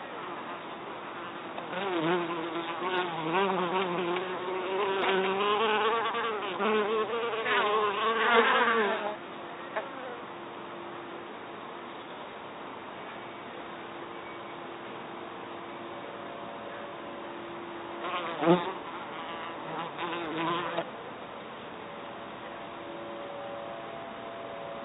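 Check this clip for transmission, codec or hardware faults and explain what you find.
Nothing in the signal points to a transmission, codec or hardware problem, and the audio holds steady with no interruptions or disturbances anywhere in it.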